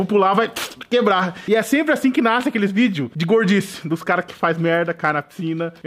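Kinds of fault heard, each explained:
No technical fault can be heard anywhere in this audio. There is nothing here that calls for a separate explanation.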